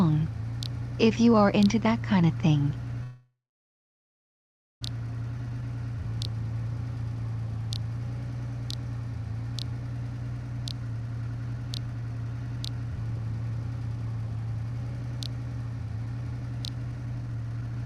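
At 3.03 s the audio stops moving forward and hangs there until 4.83 s. There's a brief buzzy continuation of the last sound that dies away, then roughly 1.47 s of silence. That's a call audio freeze, most likely packets stuck in transit while the jitter buffer drained. When things resume, the audio picks up right where it left off, so nothing is lost. Instead there's a 1.78 s gap pushed in, and everything after it runs that much later.

Shortly after, from 5.38 to 5.62 s, there's a jitter buffer slow-down. The receiver is rebuilding its reserve by repeating tiny pitch-period-sized slices. Playback drops to about 86% speed with the pitch unchanged, stretching that quarter-second by 41 ms, so the sound comes out a little drawn-out and lingering.

From 10.93 s to the very end there's a jitter buffer speed-up. The buffer is holding more than it wants, so it keeps snipping out short pitch-period chunks back to back to catch up. 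Playback runs at about 113% while the pitch stays the same. Over that stretch roughly a second of material gets trimmed out, and the tail end sounds noticeably hurried and rushed.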